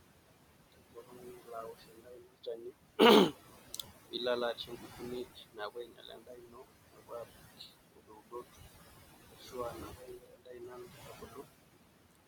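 Throughout the speech, noise suppressor artifacts are present. The room noise, sitting only about 8 dB below the speech, is pulled down by about 20 dB whenever the suppressor judges a frame to be noise-only, then allowed back up under active speech. The background therefore pumps in and out with the talking.

Speech cut by the noise suppressor occurs in five stretches: 0.72 to 2.74 s, 4.54 to 6.74 s, 6.92 to 7.73 s, 7.92 to 8.58 s and 9.26 to 11.46 s. In each, the suppressor misclassifies quieter parts of the speech as noise and attenuates them by about 21 to 22 dB along with the background. Roughly one and a half seconds are affected in each of the first two stretches, about half a second or less in each of the next two, and about two seconds in the last, where soft consonants and word endings sound swallowed or faint.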